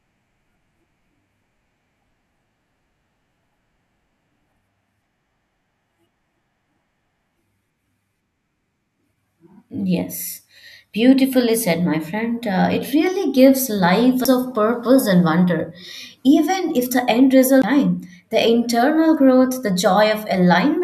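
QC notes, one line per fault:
14.24 s and 17.62 s, CD skip: a knock or a flaw made the laser jump to another turn of the disc's spiral, so the player muted for roughly 10 to 15 ms and resumed elsewhere, heard as a tick with the speech suddenly jumping out of continuity.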